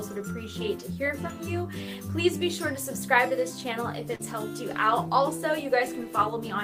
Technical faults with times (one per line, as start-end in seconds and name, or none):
4.15-4.21 short concealed packet loss